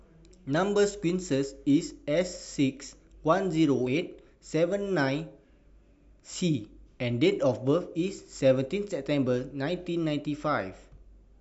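At 3.86 s the decoder never plays some compressed frames of this speech recording, either because they are missing from the stream or because it rejected them as corrupt. That is a case of compressed frames skipped: playback jumps forward by roughly 20 ms, a whole number of frames, so a sliver of the speech simply vanishes.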